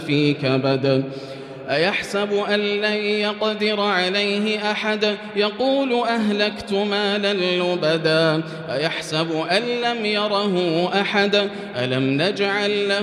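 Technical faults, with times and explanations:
No technical faults can be heard anywhere in the recording.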